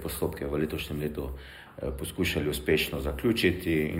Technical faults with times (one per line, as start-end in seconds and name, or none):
0.00-3.99 channel delay (comb filtering)